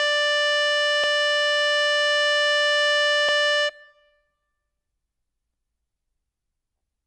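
At 1.04, 3.29 and 5.54 s the music stutters from overlapping chunks: each 2 s chunk replays the last 250 ms, visible as duplicated waveform segments and vertical spectrogram seams.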